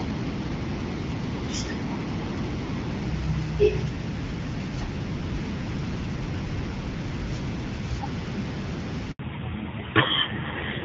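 It's a speech clip on what sounds like an HD Voice call, with only light wideband codec colouring at first. At 9.11 s there's a handover gap: the call jumps networks and nothing comes through for 80 ms, so the sound cuts out abruptly and whatever was said in that window is simply gone. Right after, from 9.19 s to the end, you get a fallback to narrowband. Everything above 4 kHz disappears and the audio turns dull and a bit rough, which fits a drop from AMR-WB to a low-rate narrowband AMR codec.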